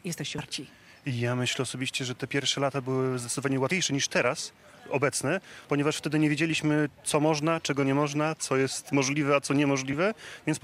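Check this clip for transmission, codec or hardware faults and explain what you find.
Two compressed frames skipped faults occur, at 0.38 s and 3.71 s. Missing compressed frames make the audio jump ahead, roughly 150 ms and 100 ms.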